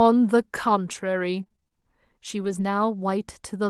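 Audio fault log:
1.43–1.73 s, repeated packet loss (robotic sound): over this 0.3 s stretch the audio breaks into a rapid run of short dropouts, seven holes of up to 27 ms each. Roughly half the span is patched by stretching the preceding sound, which gives the choppy, buzzy, robotic texture. On a spectrogram the harmonics turn into smeared, repeated horizontal bands broken by brief vertical gaps. The waveform shows clipped-off segments and repeated cycles instead of a smooth envelope.
2.41–2.63 s, lost packet rebuilt from error correction: there is no gap here, but about 120 ms of the audio, which fits six 20 ms packets, comes from the low-bitrate backup copy that Opus carries in the following packet. Those frames sound rougher and grainier than their surroundings because the copy was coded far more coarsely. On a spectrogram the stretch looks noisier and more blurred between harmonics, beneath the steady 12 kHz ceiling the call codec sets across the clip. 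The waveform stays continuous.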